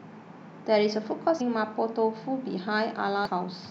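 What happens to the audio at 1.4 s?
A brief glitch cuts through the speech at 1.4 s. It comes from damaged data in the compressed stream: the decoder misreads or drops the corrupted frames, loses sync, and jumps ahead to the next valid frame header.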